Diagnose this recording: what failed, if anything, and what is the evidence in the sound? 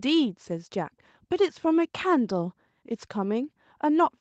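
Nothing failed; no faults present.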